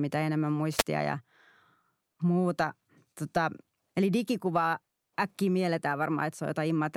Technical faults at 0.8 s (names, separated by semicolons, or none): wireless microphone noise hit